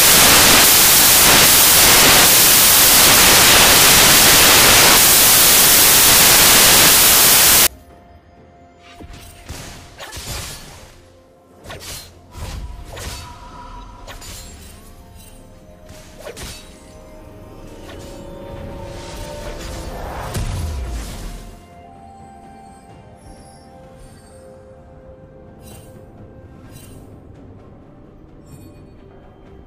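From the start to about 7.67 s you get samples built from the wrong bytes: the reader is stitching each sample's bytes together misaligned or swapped, so the jittery low bits end up dominating. It comes across as harsh, loud broadband noise.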